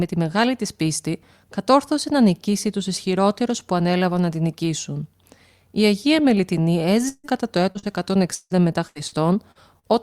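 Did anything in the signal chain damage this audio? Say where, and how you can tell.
Yes, repeated packet loss (robotic sound) from 7.08 to 9.86 s, at the network stage. Eight gaps, the longest 153 ms, left the speech choppy with pieces missing. Each hole was patched by extending the preceding sound, concealing about a fifth of that stretch.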